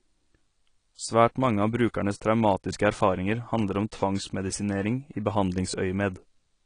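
From start to finish the speech sounds dull and smeared, with nothing above about 10.2 kHz and a warbling, fizzy texture on sustained sounds and sibilants. This is AAC compression, likely AAC-LC at a low bitrate, around 32 kbps, thinning and band-limiting the spectrum.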